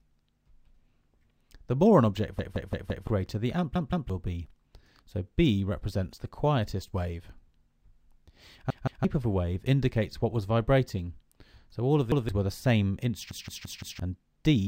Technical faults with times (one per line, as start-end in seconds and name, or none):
2.39-3.07 repeated buffer
3.75-4.10 repeated buffer
8.70-9.05 repeated buffer
12.12-12.29 repeated buffer
13.31-13.99 repeated buffer